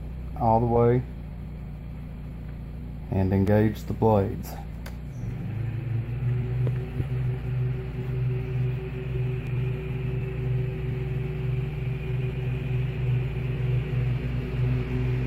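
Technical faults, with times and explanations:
3.48 s and 9.47 s, audio missing between chunks: at each point the sound skips forward, with a tiny piece of about 7 ms gone and the audio on either side butted straight together with no gap of silence. The two skips are six seconds apart, which points to a recorder or processor handling the audio in 6-second blocks, and the likely cause is that it dropped a few milliseconds each time it closed one block and started the next.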